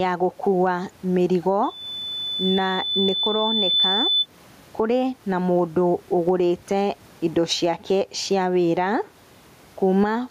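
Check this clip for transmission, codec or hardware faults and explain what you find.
Two faults are audible: level pumping across the whole clip and a feedback squeal in the first half.

Gain pumping runs from start to end. The swing is around 10 dB. The likely cause is input gain set far too high, with a fast limiter clamping each peak. Loud and soft passages sit close together. The speech sounds squashed. The room noise sits about 38 dB below the speech.

A loudspeaker feedback squeal starts at 1.63 s, right after "ya gũkua mĩrigo". It lasts until 4.26 s, ending before "kũrĩ na mũndũ ũgũrĩte". The microphone is picking up the loudspeaker it feeds. At 3.5 kHz the loop gain goes above one, so that frequency keeps feeding itself. It is a single piercing tone. It grows over about two seconds and peaks about 5 dB above the speech.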